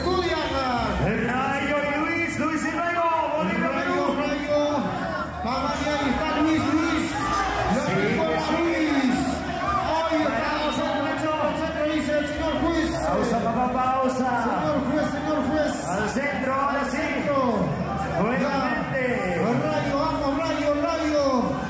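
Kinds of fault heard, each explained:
No technical faults are audible in this recording.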